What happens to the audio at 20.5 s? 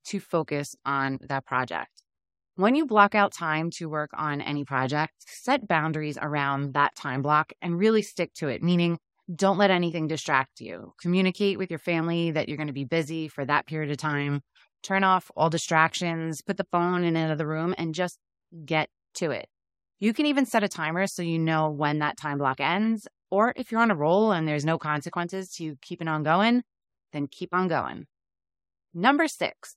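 Between "can even" and "set a timer so", from 20.47 to 20.49 s, a 23.2 ms block plays twice, consistent with repeated frames, producing a brief stutter and a 23.2 ms longer clip.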